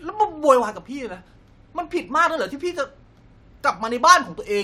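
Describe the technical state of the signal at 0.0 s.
At 0.0 s the speech signal is intact, with no dropout, clipping, distortion or other fault audible at that point.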